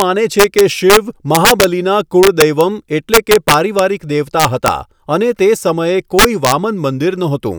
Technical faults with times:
0.00 integer overflow
0.39-0.97 integer overflow
1.35-1.64 integer overflow
2.23-2.61 integer overflow
3.14-3.79 integer overflow
4.40-4.68 integer overflow
6.19-6.52 integer overflow

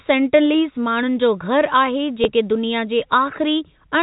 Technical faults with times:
2.24 packet loss with last packet repeated

